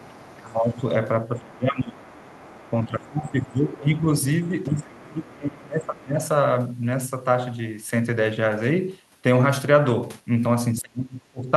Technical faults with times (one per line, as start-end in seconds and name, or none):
0.00-0.84 speech suppressed in double talk
0.15-0.53 other side's voice leaking through
1.39-2.19 speech suppressed in double talk
2.15-3.51 other side's voice leaking through
2.84-6.19 speech suppressed in double talk
4.18-5.33 other side's voice leaking through
5.99-6.03 other side's voice leaking through
10.81-11.57 speech suppressed in double talk